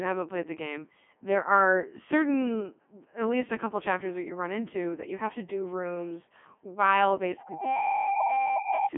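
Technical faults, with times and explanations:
Throughout, Codec 2 vocoder: heavily damaged, robotic, buzzy speech confined to a 200 Hz–3.4 kHz line band, nothing above 3.5 kHz. Only pitch, voicing, energy and spectral envelope survive, and the decoder rebuilds the voice from sine waves. This fits a 3.2 kbit/s mode.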